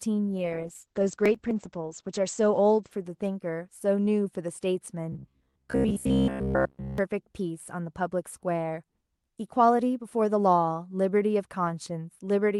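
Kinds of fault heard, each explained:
Call bitrate drop: From 0.38 to 4.39 s the speech loses clarity. The bitrate falls from 32 kbps to 9 kbps and stays at its lowest for about 1.5 s. The encoder then codes the voice coarsely and trims its top end. The audio bandwidth shrinks from 20 kHz to 8 kHz. The speech sounds muffled and watery until the rate climbs back.
Processor overload crackle: Between 1.14 and 1.51 s a gritty tearing rides on the speech. The processor missed its deadlines many times in a row. Each missed buffer was skipped rather than held, leaving a short hard-edged gap. The gaps fit buffers of about 10 ms, roughly ten of them in a cluster. They blend into one burst of crackle that stops once the load eases.
Robotic sound from repeated short buffers: From 5.12 to 6.98 s the speech turns into a rigid, metallic buzz. It still follows the rough shape of the words. The buzz sits at 66.7 Hz, which fits a buffer of about 15 ms being played over and over. 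The likely cause is new audio arriving too seldom. The software fills the time with repeats, and most of this stretch is repeated rather than fresh audio.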